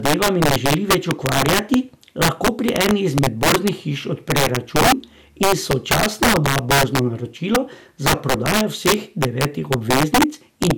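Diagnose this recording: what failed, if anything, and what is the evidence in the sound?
Integer overflow at the gain or sample-format conversion stage: throughout the speech, loud syllables burst into violent cracks far sharper than clipping. Peaks driven about 8 dB past full scale wrap to the opposite sign, a few percent of samples in all. The waveform shows rail-to-rail flips; a spectrogram shows broadband vertical streaks.

Generation loss in the codec stage, likely from repeated MP2 encoding at 128 kbit/s, decoded and re-encoded several times. Across the whole clip the speech sounds swirly, hollow and smeared, with blurred attacks. A spectrogram shows a hard ceiling at 18 kHz.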